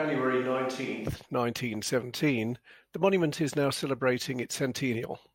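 Speech recording with a microphone fault at the start. From the opening to 1.09 s, the sound is roomy and hollow, thin in the bass, about 5 dB quieter, with faint room noise. This is likely a switch to a distant microphone. Close pickup returns abruptly at 1.09 s.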